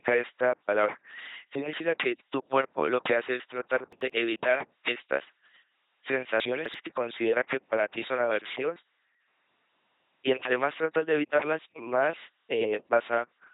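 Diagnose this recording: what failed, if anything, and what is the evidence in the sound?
The codec stage failed. The whole clip is speech passed through an LPC-10 vocoder at 2.4 kbit/s. It sounds buzzy and robotic, with nothing above 3.8 kHz. A ten-pole filter is driven by either a pulse train or noise, so every moment is forced fully voiced or fully unvoiced.

Chunks out of order point to the buffer or storage stage. From 3.93 to 4.10 s, one 85 ms chunk plays one chunk late. From 6.40 to 6.74 s, another plays three chunks late. Each jumbled moment has three hard joins.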